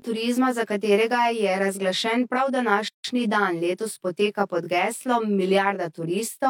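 Channel delay causes comb filtering throughout the speech. One channel lags by roughly 20 ms before the mono sum, cutting fixed notches from about 30 Hz upward.

At 2.88 s, just after "razglašen prav", a 160 ms gap at a join of encoded pieces drops the sound out. Encoder padding left silence between pieces.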